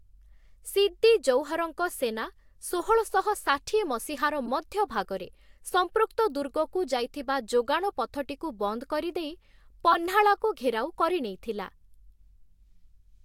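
Corrupt frames decoded: flipped bits in compressed speech frames were played anyway, misplacing energy into a brief glitch at 4.46–4.48 s, after "ସେନା ଷୋହଳଶହ ଷାଠିଏ ମସିହାର" (about -25 dBFS), and a much louder burst, about -5 dBFS, at 9.91–9.96 s, after "ଯୋଗାଣ ପଥଟିକୁ ବନ୍ଦ କରିଦେଇ". Each burst's length suggests a couple of damaged frames.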